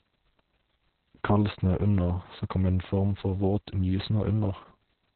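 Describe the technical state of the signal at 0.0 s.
At 0.0 s the speech already carries Opus voice compression, which continues throughout the clip. Nothing is present above 4.2 kHz, so the audio is muffled, and the coarse coding of the excitation makes it hoarse and slightly robotic. The SILK-style narrowband coding and heavy excitation damage suggest a very low bitrate, around 6 kb/s.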